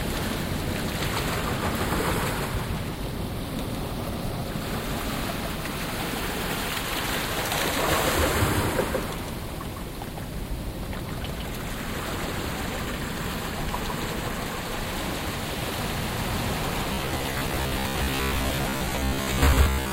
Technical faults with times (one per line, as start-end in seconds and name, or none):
0.00-19.92 doubled audio track
16.93-19.92 robotic sound from repeated short buffers